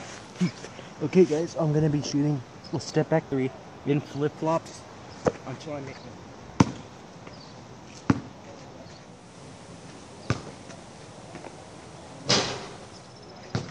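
At 8.94 s there's digital radio blending to analogue FM: a 464 ms cross-fade brings up hiss about 25 dB down until 13.37 s.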